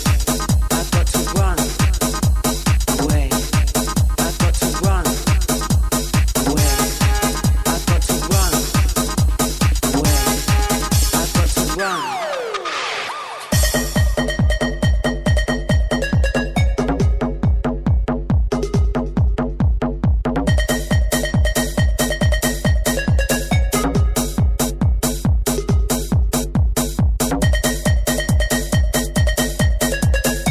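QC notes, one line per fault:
No fault to note, so this is the one line.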